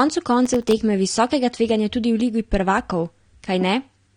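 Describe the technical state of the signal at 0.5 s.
At 0.5 s you're inside a burst of processor overload crackle running from about 0.46 to 0.72 s: tiny buffers miss their deadlines in a row, leaving hard-edged silent gaps that add up to gritty tearing. Underneath, the dull, smeared quality with nothing above 9.7 kHz is likely AAC compression, fitting AAC-LC at around 32 kbps.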